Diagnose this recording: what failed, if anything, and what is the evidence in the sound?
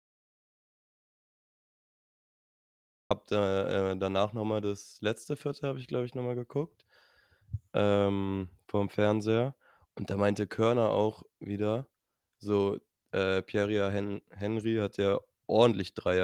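Capture-stage input loss, likely a disconnected or muted source while the recorder kept writing silence. The clip opens already inside an audio dropout to silence: silence with no room tone from 0.00 to 3.11 s, then speech enters abruptly on "da äh danach nochmal".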